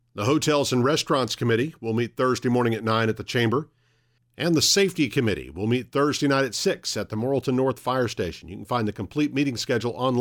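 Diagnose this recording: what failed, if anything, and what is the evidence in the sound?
Nothing failed: no stage of the chain leaves any evidence of a fault in the sound.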